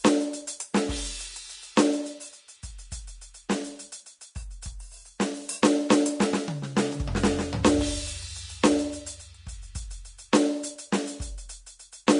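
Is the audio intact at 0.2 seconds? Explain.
No. At 0.2 s, as throughout the music, there is Vorbis compression damage, with likely cause a low-bitrate Vorbis encode, around 35 kbps by the sound of it. The codec describes the spectrum as a smooth floor plus a coarsely quantised residue, and at this quality it discards everything above 10.6 kHz and reduces the remaining treble detail to noise-like grain. The damage is plainly audible: a dull top, hissy roughness on tones, and smeared attacks.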